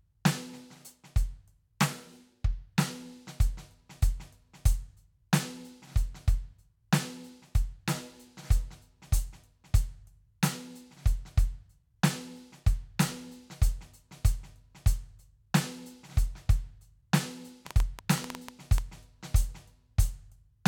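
A train of clicks runs from 17.67 s to 18.79 s: about ten sharp pulses of much the same shape, arriving at an uneven pace of roughly nine per second and peaking about 15 dB above the music. They sit on top of the music as a brief burst of irregular ticking and popping. The cause is likely interference from nearby equipment or a faulty connection or power supply, repeatedly injecting a short spike into the signal path for about a second.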